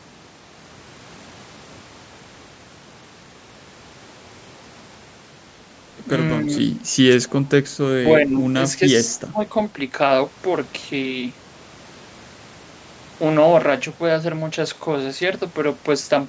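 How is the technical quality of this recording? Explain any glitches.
The recording has two kinds of call-processing glitch clustered between about 6.4 and 9.5 s. The audio comes through a call's microphone path, with nothing above 8 kHz.

Speech suppressed in double talk occurs at 6.43–6.51 s, 8.26–8.47 s, 8.73–8.81 s and 9.09–9.54 s. The voice briefly sags by about 5 dB in the first three. In the last, it drops by about 20 dB. This is likely an echo canceller meeting both parties speaking at once: unable to tell this talker from loudspeaker echo, it ducks everything.

An echo leak at 7.39–7.49 s adds a faint ghost of the voice trailing 284 ms behind, about 25 dB below the speech. It is likely leftover loudspeaker pickup that the echo canceller failed to remove and sent back down the line.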